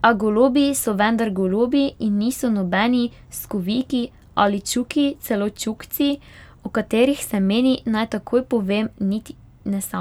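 No technical faults can be heard anywhere in this recording of speech, with the signal holding steady throughout and showing no dropouts, distortion or interruptions.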